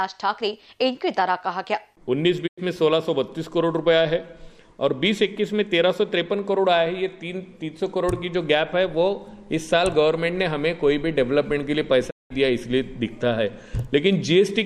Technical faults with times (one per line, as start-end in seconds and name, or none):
2.46-2.59 digital broadcast dropout
12.09-12.32 digital broadcast dropout